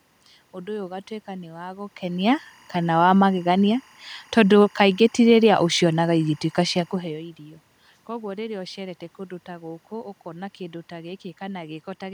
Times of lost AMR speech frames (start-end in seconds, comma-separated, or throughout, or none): none